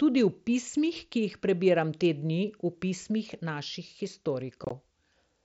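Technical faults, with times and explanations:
4.64–4.71 s, unconcealed Bluetooth headset packet loss: within 60 ms the speech is cut by several short holes, about 37.5 ms of sound missing in total, the longest gap 22.5 ms. This pattern fits roughly five lost headset frames. Each missing frame becomes silence or an idle pattern with hard edges, so the sound is a brief rough chop. It is not concealed loss, which would fill the gaps with smeared or repeated sound, and the holes are far shorter than a network dropout.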